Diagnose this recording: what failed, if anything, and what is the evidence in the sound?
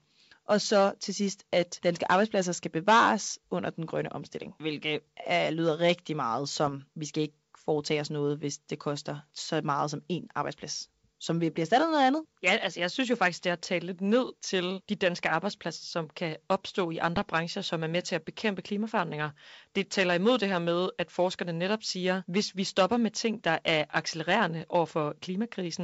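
Bit errors on an ADPCM link are the failure, at the codec/transmission stage of a G.722 wideband call. Two short rough bursts with pops and level jumps occur at 6.64 to 6.73 s, between "er lyder rigtig meget" and "vi skal ikke foretage", and at 17.16 to 17.30 s, between "som kan opstå i" and "som er med til". Flipped bits corrupt the decoder's step size and predictor, so each error rings on briefly instead of staying a single click. On a spectrogram these appear as broadband vertical smears, and on the waveform as jagged amplitude excursions. The error rate sounds low, under one percent, and the first burst is the denser one.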